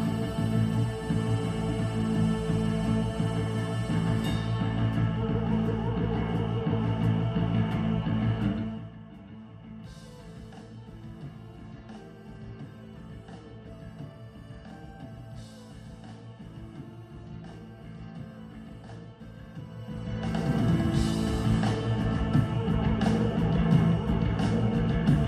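Nothing goes wrong anywhere in this clip, and the gentle fader-style level changes that do happen are just part of how it was mixed.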